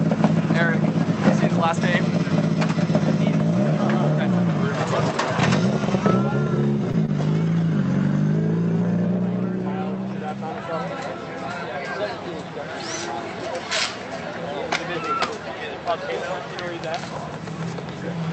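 At 6.91 to 6.96 s and again at 7.06 to 7.10 s there is short concealed packet loss. Each time, about 20 ms of audio failed to arrive in time. The receiver covered the gap by extending the preceding sound for roughly 21 to 23 ms, then blended back into the real signal. Both gaps are heard as a quick smear or wobble, a tenth of a second apart. They pass through an Opus call path, with the top end limited to about 8 kHz.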